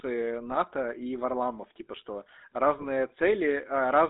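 From start to finish the speech carries the buzzy, gravelly texture of the GSM full-rate codec, consistent with the 13 kbps full-rate coder. The vocal tract is modelled and excited by a coarse, regularly spaced pulse train, which gives the voiced sounds a rasp, and the line band runs only from 250 Hz to 3.7 kHz. The damage is plainly audible. Unlike the smeary, watery artefacts of modern transform codecs, this is a steady, grainy roughness built into every voiced sound.

At 0.50 to 0.57 s, and again at 2.78 to 2.87 s just after "типа что", GSM bit errors break through. Corrupted filter, pitch and gain parameters reach the decoder, so for roughly 70 and 84 ms, which fits three and four 20 ms frames, the spectrum warps and the level jumps, producing squawks, pops and gargling. Packet loss would instead leave gaps or smooth concealment.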